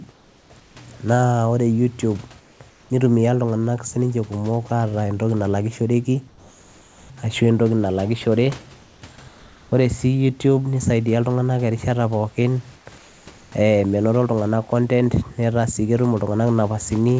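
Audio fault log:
0.12–0.76, 2.40–2.90, 6.28–7.10, 8.82–9.02, 9.28–9.72 and 12.76–13.52 s: comfort noise in place of the background. Pauses turn into a flat, textureless hiss, sometimes about 3 to 5 dB quieter, likely because the receiver synthesises noise while transmission pauses.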